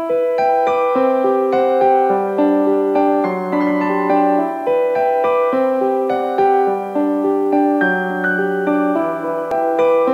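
From start to finish the audio carries a grainy, gritty distortion that rides along with the sound, growing rougher as levels fall, sitting roughly 40 dB below the signal. This is likely low bit depth without dither: the audio was rounded to only a few bits, which fits an 8-bit word, so the rounding error tracks the waveform rather than spreading into a smooth, steady hiss.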